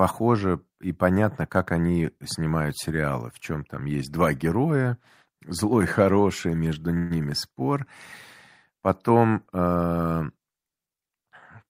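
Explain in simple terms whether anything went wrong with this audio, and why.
At about 6.97 seconds the speech briefly stalls. For roughly an eighth of a second, until 7.12 s, the last sound is stretched into a short buzzy smear, then the speech carries on exactly where it left off. This is a call audio freeze. The likely cause is that packets of sound were held up on their way, so the receiver ran out and filled the wait. Nothing is lost. The speech simply arrives slightly later afterwards.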